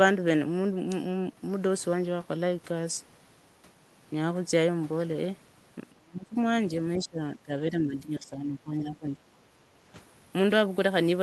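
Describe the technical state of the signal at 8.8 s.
At 8.8 s the speech sags, by up to around 10 dB, within 7.7 to 9.17 s: speech suppressed in double talk, likely an echo canceller ducking overlapping talk.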